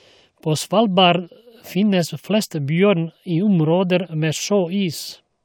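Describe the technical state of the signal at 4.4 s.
At 4.4 s the speech signal is intact, with no dropout, clipping, glitch or other technical fault audible at that moment.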